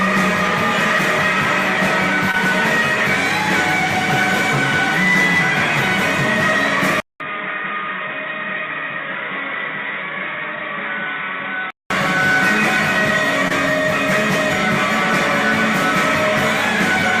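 At 2.31 s a short concealed packet loss lasts about 40 ms. A stretch of audio arrived too late and the decoder filled the gap by extending the preceding sound, then blended back. The result is a brief smear or wobble, not a true dropout to silence. From 7.00 s to 11.9 s the sound goes dull and boxy, with nothing above 3.8 kHz. It comes in after a 200 ms silence, is about 5 dB quieter, and carries a new noise floor about 50 dB down. It then clears again. The likely cause is the input switching to a poorer device. It differs from a codec bandwidth drop because the level, tone and background noise change together. A second concealed loss at 13.48 s gives the same momentary smear, again about 40 ms long.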